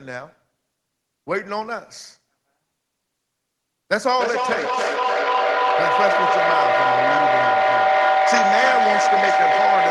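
From 4.13 s, a microphone-to-loudspeaker loop gains level on each pass, building a feedback howl near 700 Hz with a loop delay of roughly 300 ms, peaking about 5 dB above the speech.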